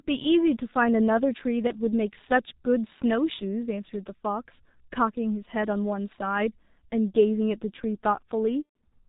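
The whole speech clip carries G.723.1 codec damage, and it is heavy. Nothing above 4 kHz survives. The speech sounds muffled and hoarse. Consonants smear together. The codec works in 30 ms frames and adapts its model of the voice slowly, so fast changes blur. The thinness fits its 6.3 kbit/s mode.

At 1.67 s comes the first VoIP packet loss concealed by the speech codec. It lasts about 50 ms, which fits one lost 30 ms frame. The decoder repeats its last pitch and filter at falling gain. A brief stretched-out sound replaces the real sound.

From 8.64 to 8.76 s the loss is longer, about 120 ms, which fits four frames in a row. The concealment stretches the sound, fades it, and mutes it from the third lost frame. Because each frame builds on the one before, the voice stays weak or distorted for a short while after the packets return.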